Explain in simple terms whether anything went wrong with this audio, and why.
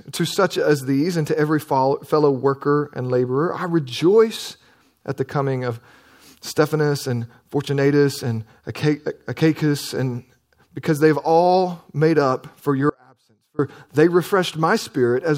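At 12.90 s the speech cuts out abruptly for about 0.7 s, until 13.59 s, leaving only a very faint trace. This is an audio dropout to a faint residue, likely from the signal briefly losing connection while the recording path stayed live.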